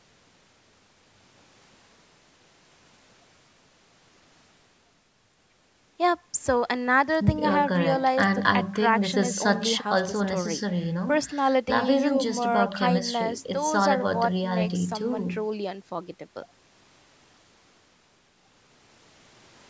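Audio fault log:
Nothing to log here; the speech has simply been through a call's microphone processing, which leaves nothing above 8 kHz and trims the lowest bass, and that's just how such a path normally sounds.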